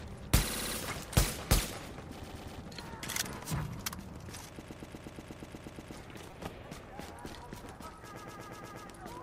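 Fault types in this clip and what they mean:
Repeated frames: a block of compressed audio is decoded again, so a 60 ms piece loops at 0.47 s and 120 ms pieces loop at 2.23, 4.61 and 8.15 s. The 4.61 s run repeats for 1.32 s. Unlike a buffer repeat, each loop is long enough to hear as a stutter, and it lengthens the audio.
Repeated buffer: at 6.31 s the playback device replays its last tiny chunk, about 5.3 ms, which fits a 256-sample buffer, four extra times. The chunk is far shorter than a frame repeat, so it comes out as a click or brief buzz with hard joins, not a recognisable stutter.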